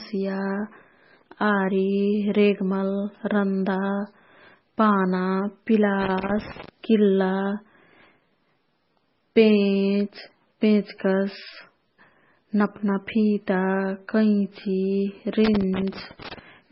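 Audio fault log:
Throughout, MP3 compression: the encoder likely ran far short of bits, consistent with a bitrate as low as 16 kbps. It zeroes weak frequency lines, which blink on and off from frame to frame, and it cuts the treble at a fixed point, so nothing is heard above 5.6 kHz. The codec damage is heavy: the speech sounds watery and swirly, s sounds turn to metallic chirps, and attacks smear.
6.01 to 6.69 s and 15.45 to 16.39 s, loose connector crackle: a worn or dirty contact made and broke rapidly as it moved, chopping the signal over and over during both spans. Each span is heard as an irregular burst of scratching crackle laid over the speech. The second burst lasts nearly a second, longer than the first at about 0.7 s.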